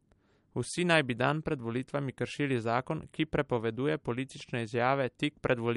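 Throughout the speech, nothing sounds above 11.2 kHz and the upper band turns watery and swirly, the likely result of MP3 compression at a low bitrate, fitting about 48 kbps. Unlike a simple low-pass filter, weak frequency lines flicker between frames, adding metallic chirps to sibilants.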